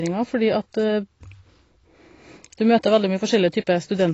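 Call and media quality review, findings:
AAC compression, throughout the clip. Dull, band-limited speech with nothing above 7.9 kHz and plainly audible codec damage: smeared transients, warbling on sustained vowels, fizzy sibilants. Likely AAC-LC encoding at a low bitrate, consistent with roughly 24 kbps. Starved of bits, the encoder lowers its cut-off and coarsely quantises each frame's spectral lines, leaving gaps and noise-filled bands.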